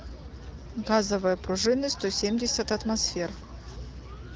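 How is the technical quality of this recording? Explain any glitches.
No glitches to report here; it's speech with the light, band-limited character of a wideband phone call, which points to AMR-WB running at about its 12.65 kbit/s mode.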